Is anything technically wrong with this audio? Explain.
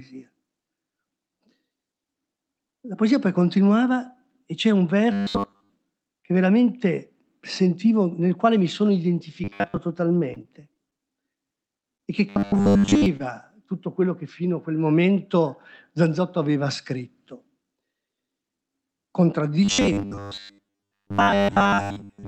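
Yes. There are two kinds of fault.

Robotic sound from repeated short buffers appears at 5.13 to 5.72 s, 9.44 to 9.78 s, 12.29 to 13.06 s, and from 19.65 s to the end. The sound becomes a rigid, metallic buzz at 100 Hz. It still loosely tracks the speech. The likely cause is audio arriving too seldom. The software then replays a 10 ms piece over and over, so most of the real audio in these spans is skipped. That repeat length sets the fixed buzz pitch.

Scattered short gaps run from 9.21 to 13.43 s. There are about seven small holes, the longest about 20 ms, with 160 ms missing in total. The receiver covered each hole by extending the preceding sound. This filled about 150 ms, a small share of the span. You hear brief ticks, smears and hiccups. The speech stays clear between them. This stretch overlaps two of the buzzing spans.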